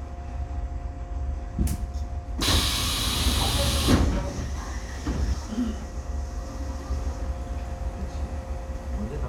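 Nothing goes wrong technically here at any point, so there's no fault to point out.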